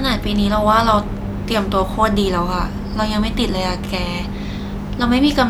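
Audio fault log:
Nothing stood out on listening to the speech in this clip.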